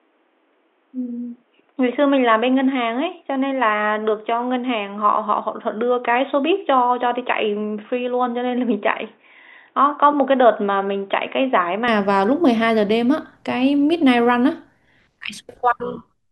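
Until 11.88 s the speech sounds boxy, cut off above 3.8 kHz and about 5 dB quieter: likely an input switched to a poorer device.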